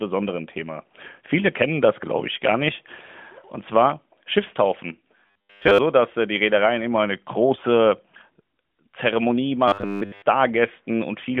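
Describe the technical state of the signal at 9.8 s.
At 9.8 s the speech turns into robotic sound from repeated short buffers, from 9.68 to 10.23 s. It has a rigid, metallic 100 Hz buzz, likely from a 10 ms block being replayed while most of the real audio is skipped. Unlike the clip's steady, light narrowband codec dullness, this buzz is abrupt and confined to that half-second.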